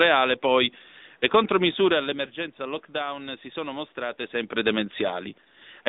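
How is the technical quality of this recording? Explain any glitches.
Quality is limited by narrowband mobile coding throughout. The AMR narrowband mobile codec squeezes speech through a 20 ms-frame vocal-tract model, leaving a clearly buzzy, synthetic tone that fits a mid-rate mode near 10 kbps. A spectrogram shows a band from about 200 Hz to 3.7 kHz, with nothing above 3.8 kHz. The level changes near 1.5 s and 4 s are the talker moving, and the room noise belongs to the recording.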